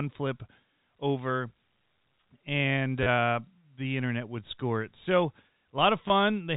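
A brief robotic stutter appears at 3.03 s, lasting about 30 ms, and a shorter one at 6.08 s of about 20 ms. Each buzzes at a rate that fits 10 ms packets (about 100 Hz). This is packet loss with last packet repeated: audio went missing, and the receiver replayed the last chunk it had until fresh data arrived. The repeats ignore the pitch of the telephone-band G.711 speech.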